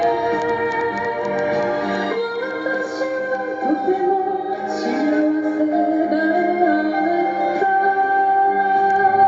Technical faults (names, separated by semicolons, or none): none